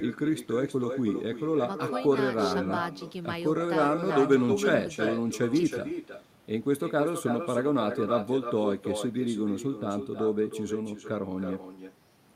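From start to finish, every phrase is trailed by a thinner copy arriving roughly a third of a second later and about 7 dB quieter. This is echo with no canceller: the far end's loudspeaker feeds its microphone, and nothing strips that returning speech out.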